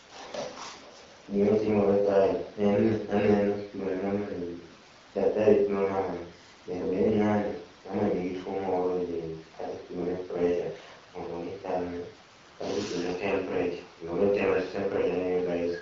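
No technical faults are audible.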